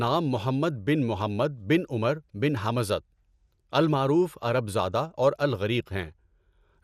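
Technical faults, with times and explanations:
Throughout, MP2 compression: the speech sounds dull and muffled, with a gurgling, grainy roughness that is plainly audible. The likely cause is MPEG Layer II coding at a rate that fits roughly 80 kbps. The codec divides the sound into 32 equal sub-bands and shares out bits among them. With so few bits, upper bands drop out and flicker in and out, and the remaining bands are quantised coarsely, which produces the granular distortion.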